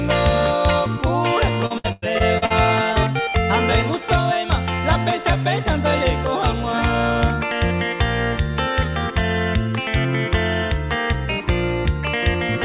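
From 1.66 to 2.52 s the call suffers repeated packet loss (robotic sound): audio arrives missing or late in six separate holes, together about 300 ms, the longest about 100 ms. The receiver patches each hole by stretching the preceding sound, so roughly a third of this stretch is synthetic fill. The result is choppy, robotic audio with pieces dropping out, heard through the narrow 4 kHz band of a G.711 call path.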